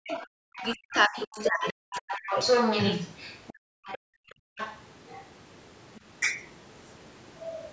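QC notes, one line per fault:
0.00–2.35 s, speech suppressed in double talk: the talker dips by up to about 40 dB, in pieces totalling around 1.5 s. Likely the canceller turning both voices down.
0.07–3.53 s, other side's voice leaking through: a second voice runs alongside, roughly as loud as the talker. Likely echo the canceller failed to remove.
3.53–4.56 s, background gated by the echo canceller: room sound drops by about 40 dB for about a second, then returns when the canceller releases the microphone.
3.85–3.98 s, 4.29–5.29 s, 5.86–6.00 s, 7.44–7.72 s, other side's voice leaking through: scraps and one longer stretch of the far voice, well below the talker. Likely residual loudspeaker echo.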